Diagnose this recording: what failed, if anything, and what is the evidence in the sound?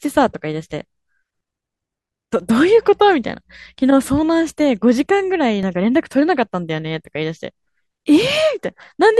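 Overlap between stream segments at playback: tiny skips at 3.66 s and 5.63 s, fitting 2 s segments. Overlapping timestamps trimmed speech, leaving waveform jumps and thin vertical spectrogram lines.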